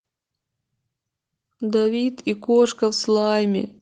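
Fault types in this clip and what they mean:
Automatic gain rising: The automatic level control judged the input too quiet and turned its gain up slowly rather than at once. From 1.58 s to 3.71 s the speech grows louder by about 5 dB. The background noise rises along with the voice, which shows the change comes from the gain stage, not the talker. The swell lasts about two seconds. It is a smooth ramp with no audible steps.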